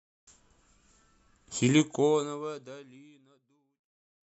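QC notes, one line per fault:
No faults found; the speech has a smooth editorial fade-out starting at about 1.5 s and running to the end.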